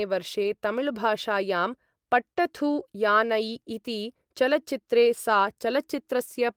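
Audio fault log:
0.43–0.49 s, lost packet rebuilt from error correction: about 40 ms went missing, which fits two lost 20 ms packets. The decoder played the low-bitrate copies carried by the packet after each, so there is no gap, but that stretch sounds rougher and noisier.
2.33–2.37 s, short concealed packet loss: 20 ms never arrived in time, so the receiver extended the preceding sound to fill the hole, leaving a brief smear before real audio resumes.
2.37–2.39 s, lost packet rebuilt from error correction: a further 20 ms, likely one packet, was played from its low-bitrate backup copy. It is gapless but grainier and noisier.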